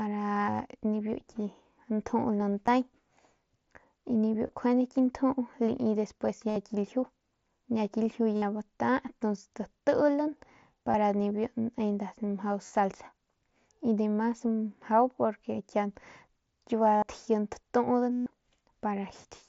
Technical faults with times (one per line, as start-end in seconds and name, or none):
2.66 concealed Bluetooth headset packet loss
4.47-4.49 concealed Bluetooth headset packet loss
6.50-6.56 concealed Bluetooth headset packet loss
8.36-8.42 concealed Bluetooth headset packet loss
10.92-10.94 concealed Bluetooth headset packet loss
12.66-12.75 concealed Bluetooth headset packet loss
16.97-17.02 concealed Bluetooth headset packet loss
18.12-18.26 concealed Bluetooth headset packet loss